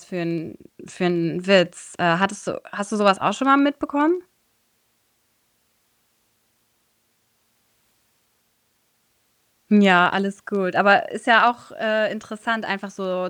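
Speech recording with no audible technical faults anywhere in its run.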